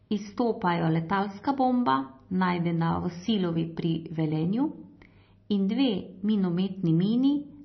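Throughout the speech, the treble stops abruptly at about 5.9 kHz, and the sound has a watery, swirling texture with smeared consonant onsets. This is likely heavy MP3 compression at a low bitrate, where the encoder drops the high band and switches weak frequency components on and off between frames.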